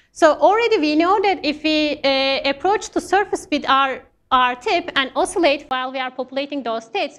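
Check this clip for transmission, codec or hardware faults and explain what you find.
One fault: an input switched to a poorer device at 5.69 s, running to the end. The sound likely moves to a different microphone or headset profile. A 20 ms gap marks the switch, then nothing above 8.3 kHz, a slightly lower level and faint new background noise, so the audio turns duller.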